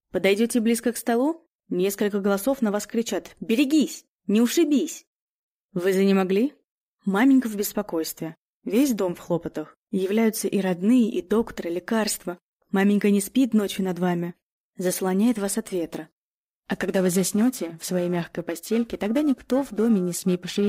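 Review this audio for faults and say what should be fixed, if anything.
From 16.55 s to the end of the clip at 20.68 s, the sound takes on a rough, metallic edge that is harshest on its brightest components and disappears in silent moments. This is periodic clock jitter: interference wobbles the converter's sample clock at a steady rate around 1 kHz, so every component picks up sidebands spaced about that far above and below it. Preventing it means giving the converter a clean, well-isolated clock and keeping interference away from it.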